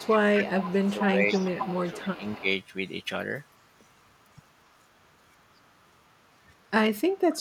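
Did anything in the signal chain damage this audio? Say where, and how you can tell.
Yes, echo leak, in call processing: a copy trails 263 ms behind at 0–0.15, 0.40–0.46, 0.69–0.91, 1.31–1.47, 1.68–2.42 and 7.32 s onward. That's likely incomplete loudspeaker cancellation.

Speech suppressed in double talk, same stage: the talker dips sharply at 0.14–0.19 and 0.36–2.46 s, likely with the canceller ducking the talker along with the echo while both sides overlap.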